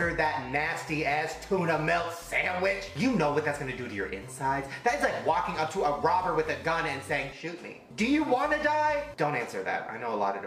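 No technical faults can be heard anywhere in the clip.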